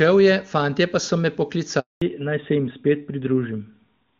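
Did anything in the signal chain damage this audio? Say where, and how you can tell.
Yes. Silence from 1.80 to 2.02 s is a 220 ms network handover gap: no speech frames arrived while the call switched links.

From 2.02 s the sound turns duller and rougher, with nothing above 4 kHz: a network fallback to narrowband, consistent with HD Voice giving way to AMR-NB.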